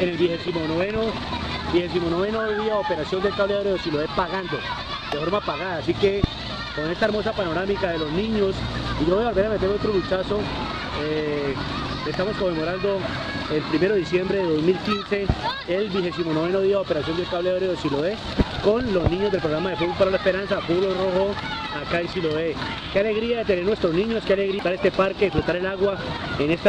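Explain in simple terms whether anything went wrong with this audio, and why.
Damaged data in a compressed stream shows up twice: from 0.48 to 0.54 s, and again as a single instant at 24.59 s. In both spots, part of the compressed file was corrupted, with bytes lost, blanked or overwritten. The player's decoder could not read those frames properly, lost track of where it was, and hunted for the next clean starting point. That is heard as a brief chirp or blip cutting into the sound.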